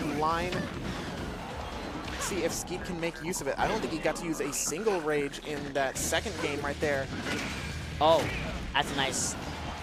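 No technical faults are audible anywhere in the recording.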